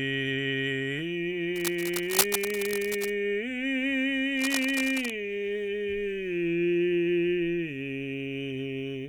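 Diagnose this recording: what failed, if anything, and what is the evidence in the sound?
Cable scratch noise appears in the analogue wiring stage. Dense, uneven rustling sits over the music from 1.56 to 3.12 s, about 5 dB below it, and again from 4.37 to 5.10 s, about 10 dB below. The likely cause is a worn cable or connector being moved, making its contact resistance fluctuate rapidly.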